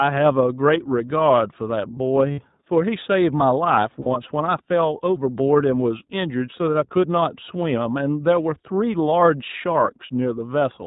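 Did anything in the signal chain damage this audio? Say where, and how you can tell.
Yes. iLBC codec damage runs throughout at the codec stage. Nothing passes above 4 kHz, and the speech sounds rough and synthetic, which fits iLBC's 15.2 kbps, 20 ms frame mode.

Lost iLBC frames occur at the network stage at 2.32 to 2.40 s and 4.00 to 4.07 s. Each gap is a held, buzzy vowel lasting about 60 ms, which fits three lost frames. The decoder repeated the last pitch cycle mixed with noise, then recovered almost immediately.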